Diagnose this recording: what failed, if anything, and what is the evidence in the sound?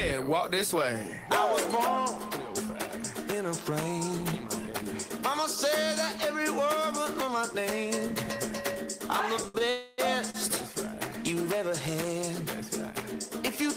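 The trouble sits at the network and jitter buffer stage. There are three short stalls from late packets, at 9.48 to 9.56 s, 9.58 to 9.62 s and 10.30 to 10.36 s. Each one holds the last bit of sound a touch too long, with a faint buzz or dip: roughly 60 ms, 18 ms and 40 ms of stretch. Then the audio picks up exactly where it left off, so nothing is actually lost. The buffer simply ran empty while a packet was running late.

Right after the first two, from 9.70 to 10.00 s, there's a call audio freeze. The sound gets drawn out for about 280 ms as a fading buzz or hiss rather than dropping to silence. Playback then resumes from the same point with nothing skipped, just a gap inserted and the timing pushed later. This was likely a run of packets held up in transit long enough for the jitter buffer to drain completely, with concealment filling the wait.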